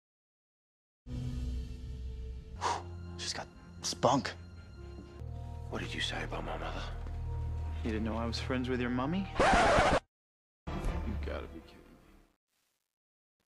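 The audio fades out over its last three seconds or so, ending at 13.5 s, and from 10.71 s that fade carries truncation distortion on a fade. As the level drops, the signal is cut to too few bits without dither, which fits a 10-bit word length. The quiet tail turns gritty and is at its worst from 11.33 s to the end at 13.51 s. A zoomed waveform shows staircase steps and flat runs, and a spectrogram shows harmonic hash and broadband speckle.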